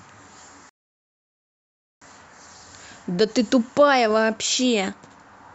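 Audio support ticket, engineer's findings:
Rebuffering stall, 0.69 to 2.02 s. Speech cuts to silence, then resumes exactly where it stopped. Nothing lost, 1.32 s added. Probable component: player buffer. Playback outran download, buffer emptied, player waited for more data.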